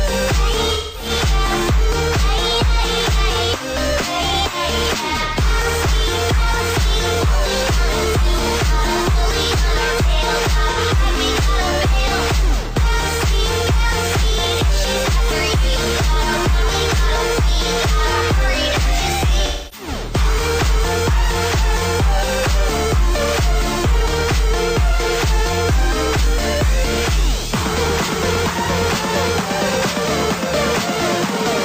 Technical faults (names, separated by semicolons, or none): AAC frame loss with concealment